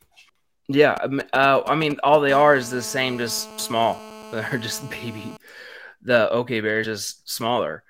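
GSM signalling bursts, from 0.97 to 2.31 s: a nearby 2G phone transmits short groups of radio pulses while signalling, and the audio circuitry rectifies them into a galloping dit-dit-dit of brief 217 Hz buzzes, roughly 10 dB below the speech.

GSM phone buzz, from 2.31 to 5.37 s: the phone then holds a call and bursts steadily 217 times a second. Rectification turns this into a continuous hard, raspy 217 Hz buzz rich in harmonics, about 19 dB below the speech and unrelated to it.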